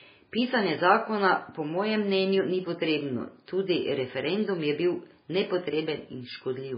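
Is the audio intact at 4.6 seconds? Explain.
No. At 4.6 seconds, as across the whole clip, the speech shows damage that likely comes from MP3 compression at a very low bitrate, consistent with around 16 kbps. Starved of bits, the encoder cuts everything above 5 kHz and drops weak frequency lines that flicker between frames, leaving dull, watery, swirling speech with smeared consonant attacks.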